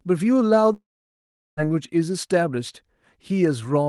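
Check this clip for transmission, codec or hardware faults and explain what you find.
There's one real fault here, a long network dropout from 0.73 to 1.60 s. The sound there smears into a fading buzz, then goes almost silent for about 0.75 s before picking up again. That's likely packets stopping while the receiver stretches the last audio, and roughly 0.84 s of speech never comes back. The Opus call path around it sounds as expected, with the top end stopping near 12 kHz.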